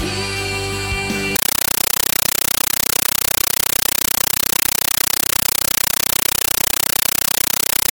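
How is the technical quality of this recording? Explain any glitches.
Poor from 1.36 s to the end. There, a compressed stream is played as audio. A Dolby Digital bitstream, likely around 448 kbps, is treated as plain samples instead of being decoded. Each frame gives a 9.3 ms noise burst, then silence, 31.25 times a second. The sound becomes very loud, chattering static.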